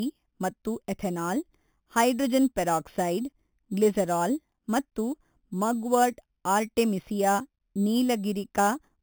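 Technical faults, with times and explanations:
Throughout, imaging from sample-and-hold upsampling: samples were repeated without smoothing, which fits an 8 kHz original. A mirrored copy of the speech fills 4 to 8 kHz about 17 dB down, heard as metallic fizz tracking loudness. A spectrogram shows that band flipped, and the waveform looks staircased.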